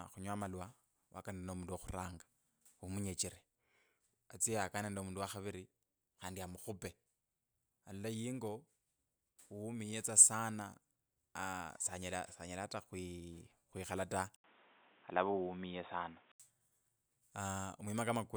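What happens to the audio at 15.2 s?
At 15.2 s the speech sounds dull and boxy. From 14.36 to 16.40 s nothing passes above 3.8 kHz, and an 80 ms gap opens at the switch. A new, faint noise floor appears. The likely cause is an input switched to a poorer device.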